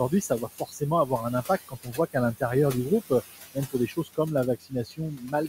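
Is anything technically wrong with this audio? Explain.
Yes. Throughout the clip the background pumps down in the pauses and swells back under the speech. These are noise suppressor artifacts: a frame-by-frame suppressor pulls noise-classified bands down by about 15 dB. The room noise, sitting about 13 dB below the speech, is what gets pumped.

At four points the speech itself turns faint, with soft sounds and endings swallowed. This is speech cut by the noise suppressor, which misreads parts of the speech as noise and lowers them with the background. It happens at 0.09 to 0.82 s (drop of about 14 dB), at 1.68 to 2.16 s just after "un impact" and before "l'intérieur du groupe euh" (about 16 dB), at 3.54 to 4.19 s just after "l'intérieur du groupe euh" (about 20 dB), and from 4.6 s to the end (about 18 dB). Within each span, only a few hundred milliseconds are affected.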